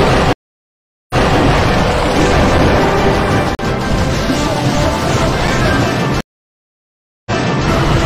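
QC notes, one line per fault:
0.33–1.38 s and 6.21–7.68 s, stream reconnect: the connection dropped, the player stalled and reconnected, then started a fresh decoder partway through the stream. The first break falls silent for 768 ms and the second for about 1.05 s. Each time the server resent a burst, so the sound picks up again 279 ms and 418 ms earlier than where it stopped, repeating material just heard. Both resumptions fade in from a restarted decoder.
2.59 s, 3.55–3.59 s and 5.47 s, block of digital silence: most likely the program failed to fill its output buffer in time, so the samples were replaced by zeros. The sound drops straight to digital silence and back with no fade. The 5.24 ms and 5.87 ms blocks are heard as ticks, and the 40 ms block at 3.55 s as a brief hole in the sound.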